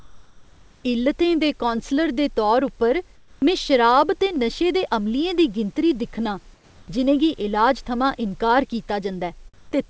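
Speech clip in which the background during pauses is replaced by comfort noise at 0.0–0.84 s, 3.16–3.42 s after "कौंसलर दे तौर उप्पर", 6.54–6.88 s after "अमलियें दी गिनतरी दिक्खनां", and 9.54–9.72 s. The real room texture gives way to a steady, featureless hiss about 1–3 dB off the surrounding background level, likely from discontinuous transmission with synthesized noise filling the gaps.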